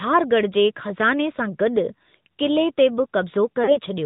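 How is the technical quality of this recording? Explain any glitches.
The quality is limited by a narrowband mobile codec throughout, with one dropout near the end.

AMR narrowband mobile codec: The speech was coded as AMR-NB at a modest bit rate, fitting a mode of about 10.2 kbps. Nothing above 4 kHz survives, so the speech is muffled and telephone-like, with a plainly audible buzzy, synthetic edge from the pulse-driven vocal tract model.

Lost AMR speech frames: From 3.64 to 3.79 s, radio errors corrupted speech frames, consistent with two lost 20 ms frames. The decoder repeated its last good settings at falling gain, so the sound smears and fades briefly, then returns weak or rough for a moment.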